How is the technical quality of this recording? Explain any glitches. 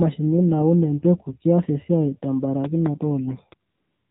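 The recording is poor, carrying mobile-network coding damage throughout, a single pop near the end, and a synthetic noise fill in the closing pause.

The AMR narrowband mobile codec runs throughout: nothing above 4 kHz survives, and the buzzy, synthetic vocal-tract modelling, plainly audible and consistent with about 7.4 kbps, distinguishes it from simple low-pass filtering.

A loud pop at 3.52 to 3.54 s jumps well above the speech, likely an electrical step or static discharge. Unlike a codec click, the speech continues unbroken underneath.

AMR comfort noise fills from 3.70 s to the end, about 0.4 s with no speech frames. Smooth, steady synthetic hiss replaces the real background, and its abrupt switching distinguishes it from genuine room noise.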